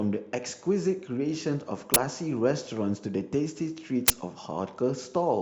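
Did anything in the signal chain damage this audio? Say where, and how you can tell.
Yes, at the driver or buffer stage: an uninitialised buffer played twice, at 1.94–1.96 s and 4.08–4.10 s. Each is a loud 20 ms burst of digital noise, where stale memory was output as samples. The waveform shows an abrupt dense block; the spectrogram shows a broadband vertical stripe.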